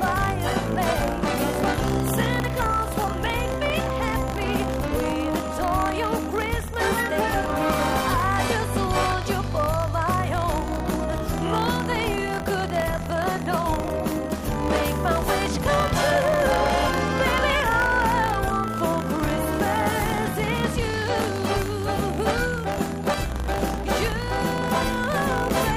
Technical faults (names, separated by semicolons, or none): buffer tearing